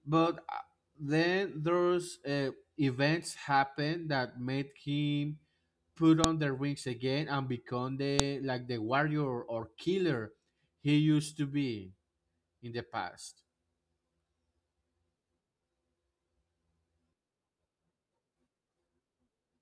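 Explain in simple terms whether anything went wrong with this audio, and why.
A file header played as audio causes a sharp click at 6.24 s, after "that made him put", and again at 8.20 s, after "rings again and become". The speech was joined from separate pieces, and each piece's header data was played as sound.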